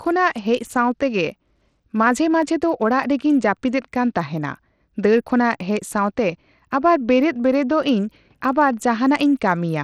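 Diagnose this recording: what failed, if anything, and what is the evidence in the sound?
The codec stage is the main culprit. Across the whole speech clip the top end is thin and unsteady, with treble flickering in and out and a gritty, aliased haze riding on the sound. That's likely Bluetooth SBC compression at a starved bit allocation, which fits a link running around 80 kbps. SBC splits the signal into a handful of wide sub-bands and hands out bits without any hearing model, so the quiet upper bands get almost nothing and the rest are quantised coarsely.

Separately, there are two single sharp clicks, at 2.42 s and 5.61 s, each a thin vertical line across the spectrum. These are dropped samples, likely from a driver or buffer hiccup. Only a tiny sliver is missing, a small fraction of a millisecond, so no sound is actually lost. The waveform just jumps from one value to a later one, and that step discontinuity is what you hear as the tick.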